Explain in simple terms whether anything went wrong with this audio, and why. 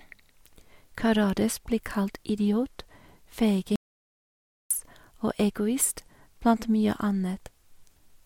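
Yes, one thing went wrong: an audio dropout to silence from 3.76 to 4.71 s. The speech just stops dead for almost a second, with no background hiss at all, then picks back up. Most likely the input briefly cut out, so whatever was said there is lost.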